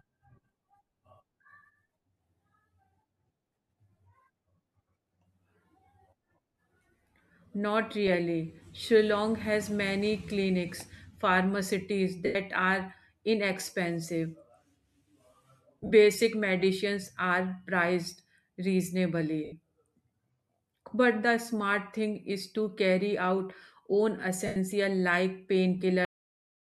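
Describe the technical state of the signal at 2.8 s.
At 2.8 s the speech signal is intact, with no fault to hear, only the slight trace of the light lossy compression that runs through the recording.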